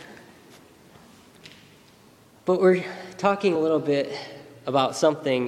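At 3.54 s, compressed frames are skipped. About two whole frames of the coded audio never reach the output, so the sound jumps ahead by roughly 50 ms. The jump length fits a frame of about 26.1 ms. Either the frames were missing from the stream or the decoder rejected them as corrupt. Adjacent frames overlap, so the join is not a sharp click. It comes out as a short, smeared blip where a sliver of the sound goes missing.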